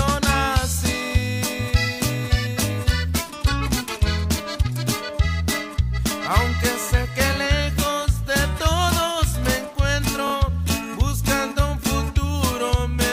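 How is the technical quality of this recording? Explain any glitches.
One glitch stands out, a repeated-frames fault at 10.27 to 10.32 s. A single 26.1 ms compressed block, which fits one MP3 frame, was played twice more, adding 52.2 ms and producing a brief stutter.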